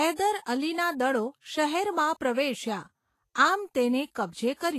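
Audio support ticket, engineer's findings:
Hissy, grainy speech throughout, nothing above 14.2 kHz. Likely Vorbis compression at a low bitrate, around 33 kbps. Coarse treble quantisation turns fine detail into noise.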